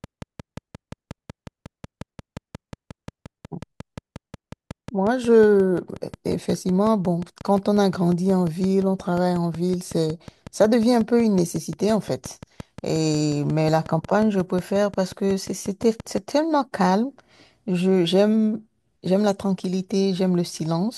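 From 0.04 s until 16.19 s, a steady tick runs underneath the speech, a train of clicks arriving at a regular 5.6 per second, about a hundred in all, each with much the same sharp shape and peaking roughly 5 dB above the speech itself, so they cut through clearly even in the pauses. Such a repeating pulse most likely comes from electrical interference from nearby equipment or from a faulty connection or power supply.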